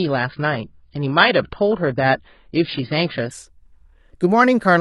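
From 0.0 to 3.31 s the speech plays from an adaptive stream starting at a low bitrate, near 16 kbit/s, so nothing sounds above 5 kHz. Then it steps up to roughly 96 kbit/s with no gap.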